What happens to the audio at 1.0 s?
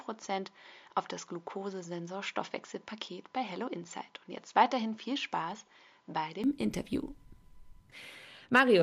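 At 1.0 s the audio is coming through what sounds like a poorer input device. That stretch runs from the start to 6.44 s. Nothing is heard above 7.2 kHz, so the top end is missing and the sound is dull and boxy. A faint new noise floor sits well below the signal. The loudness stays about the same. At 6.44 s the fuller sound returns with no gap, likely because the input switched back to a better device.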